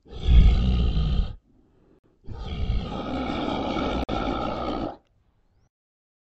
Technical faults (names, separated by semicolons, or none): gap between chunks